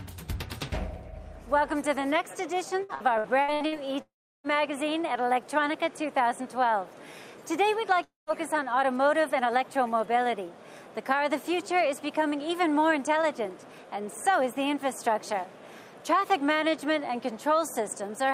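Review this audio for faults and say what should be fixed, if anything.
From 2.83 to 3.75 s the sound turns choppy, broken by six short holes, the longest 64 ms, with about 38% of that stretch patched over. This is repeated packet loss (robotic sound): each lost packet is filled by stretching the preceding sound, and the next loss follows almost immediately. A larger jitter buffer, forward error correction or a more stable connection would prevent it.

At 4.02 to 4.47 s and again at 8.04 to 8.30 s the sound smears into a fading buzz or hiss, then goes silent for about 340 ms and 160 ms respectively before returning with a piece missing. The likely cause is a long network dropout, where nothing arrived and the receiver extended the last sound until it faded out. A steadier network path with redundancy or retransmission would prevent these gaps.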